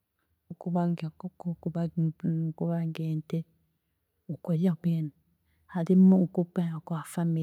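A speech recording, with nothing technically wrong with it.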